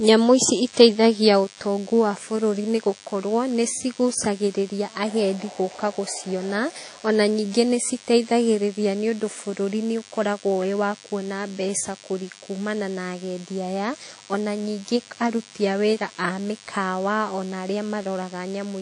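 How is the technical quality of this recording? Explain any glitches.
The technical quality is poor: two faults run through the whole speech clip.

Throughout, there is DECT cordless phone buzz. A nearby DECT handset or base transmits a radio burst every 10 ms, and the audio circuitry rectifies it into a steady, thin 100 Hz buzz rich in harmonics, sitting roughly 25 dB below the speech.

Also throughout, the speech sounds ringing and washy, with a hiss that rises and falls with the voice and thin, hollowed-out detail. This is likely WMA compression at a low bitrate, which fits about 32 kbps. Long transform blocks smear quantisation noise over tens of milliseconds, and weaker spectral components are discarded.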